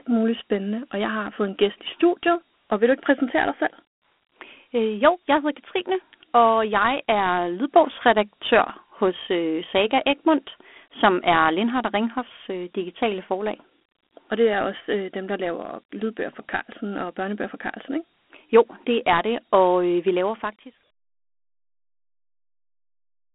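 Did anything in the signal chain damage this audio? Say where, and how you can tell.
Yes. At the codec stage, Dialogic VOX ADPCM coding at 32 kbps, which points to 8 kHz sampling, removes everything above 3.8 kHz and leaves gritty quantisation hiss trailing the speech throughout.

At the converter, a DC step at 15.62 s, between "også øh dem der" and "lydbøger for", shifts the zero line. A 20 Hz high-pass then drains it away, leaving a brief low thump.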